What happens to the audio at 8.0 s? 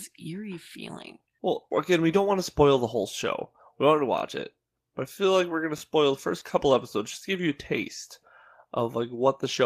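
At 8.0 s the speech carries on cleanly, with no dropout, click, distortion or other fault at that moment.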